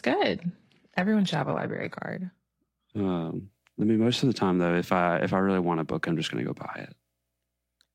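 Speech with an adaptive stream starting at a low bitrate: from 0 to 2.0 s the treble sounds thin and synthetic with stronger codec artefacts, fitting HE-AAC near 16 kbit/s. Quality then jumps without any gap to a fuller sound reaching 12.3 kHz, unlike a mid-stream bitrate drop.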